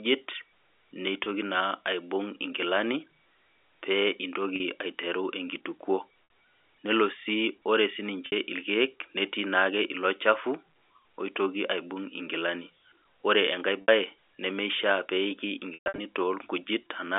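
Packet loss with pitch repetition strikes at 1.24 s (20 ms), 4.56 s (40 ms), 6.24 s (60 ms, just before "nelobsi ore"), 8.26 s (60 ms, right after "nelobsi ore"), 13.82 s (60 ms), and 15.74 to 15.98 s, where 200 ms drops out in scattered runs up to 120 ms long. The step sizes fit 20 ms packets. The receiver loops the last pitch cycle, so short gaps hold as a brief buzzy note. Longer runs fade toward silence, and the sound cross-fades back in. A plain dropout would instead cut straight to silence or click, without that sustained tone. The band-limited G.711 telephone sound carries through each of these gaps.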